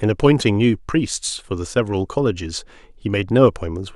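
No technical faults are audible.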